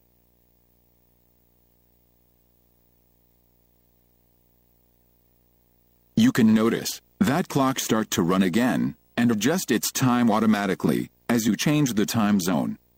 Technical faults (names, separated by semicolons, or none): video or display buzz